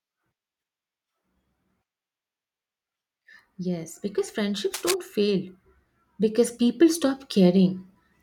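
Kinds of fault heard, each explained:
Cable scratch noise: a dense, uneven burst of scratchy rustling sits over the speech from 4.74 to 4.94 s, about 0.2 s long and only slightly quieter than the speech. It likely comes from a worn cable or connector being moved, its contact resistance fluctuating rapidly.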